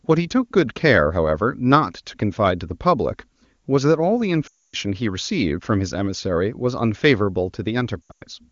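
From 4.47 to 4.76 s, lost AMR speech frames. The wideband decoder reuses the last good sound, then drops it to near silence within two frames. From 8.02 to 8.22 s, scattered losses, the longest run 100 ms, drop the voice to near silence.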